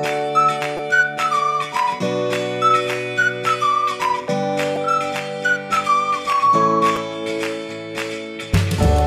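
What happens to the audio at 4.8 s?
At 4.76 s, fresh audio failed to reach the playback device in time, so it replayed its previous buffer once, a repeated buffer of about 5.8 ms, which fits a 256-sample buffer. The doubled sliver and its hard joins produce a brief click or buzz.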